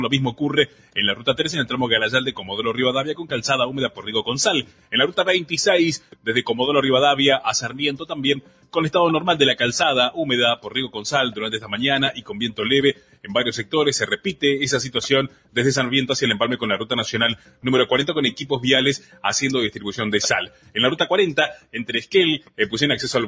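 A speech-tuned noise suppressor has been left running on this audio, and you can hear it treating sustained material as noise: held parts and tails get pulled down while attacks punch through, so the level keeps pumping and thinning with a swing of around 10 dB across the clip. Alongside that, it passed through call microphone processing, and nothing comes through above 8 kHz. The clearest spots of sound cut by the noise suppressor are 0.33 to 1.33 s, 2.3 to 6.3 s, 7.66 to 8.76 s, 10.56 to 15.57 s, 17.36 to 17.65 s and 18.98 to 22.59 s, each dipping by about 10 dB at worst. Within those spans it isn't the whole stretch. The suppressor clamps down in patches totalling anywhere from a fraction of a second to a second and a half, mostly where the sound is steady or decaying, so sustains sag and tails get chopped short.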